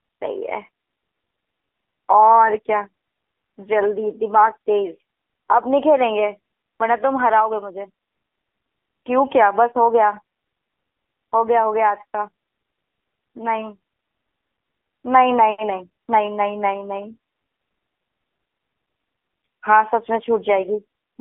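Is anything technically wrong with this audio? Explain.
Yes, the whole speech clip carries AMR narrowband mobile codec damage. The band is squeezed to roughly 250 Hz to 3.5 kHz, and the voice is rebuilt from a vocal-tract model fed by sparse pulses, so it comes out plainly buzzy and synthetic. That fits a low mode around 7.4 kbps.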